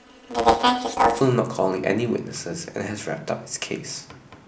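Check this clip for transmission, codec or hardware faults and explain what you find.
There is one fault, planar audio read as interleaved, from 0.0 to 1.21 s. Each short block stores all left samples before all right ones, but the player treats it as alternating pairs, so each half replays at double speed. With blocks of about 8 ms, consistent with 128-sample blocks, the speech gains a robotic buzz at 125 Hz and no clear octave shift.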